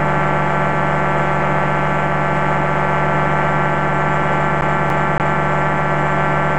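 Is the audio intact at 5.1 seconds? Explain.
No. At 5.1 seconds the audio is caught in a fast, even stutter: the same 0.28 s fragment plays three times with a brief mute at each jump, from 4.61 to 5.47 s. This is a CD stuck on one turn, where a scratch throws the laser back one track each revolution.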